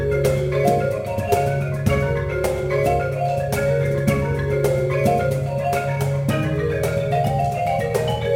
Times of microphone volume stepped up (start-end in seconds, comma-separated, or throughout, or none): none